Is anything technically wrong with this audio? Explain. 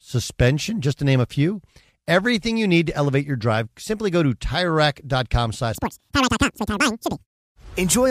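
Yes. From 5.75 to 7.44 s there is a section at the wrong speed: the speech plays at 2.0 times its recorded rate, likely from being clocked out at the wrong rate, so pitch rises around ten semitones and the delivery sounds squeaky and rushed.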